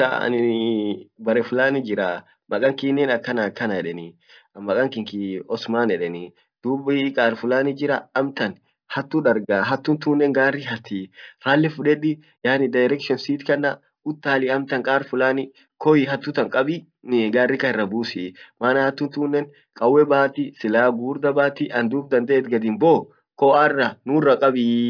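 No technical faults can be heard anywhere in the recording.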